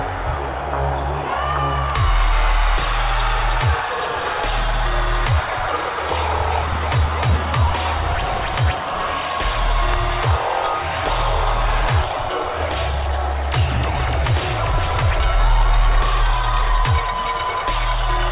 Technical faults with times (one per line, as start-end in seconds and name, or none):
none